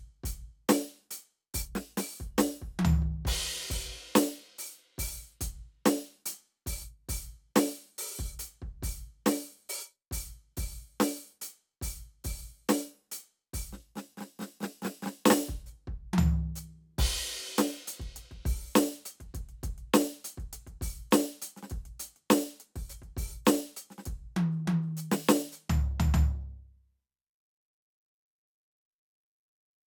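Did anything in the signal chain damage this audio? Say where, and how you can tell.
No, nothing in this music stood out as damaged on listening.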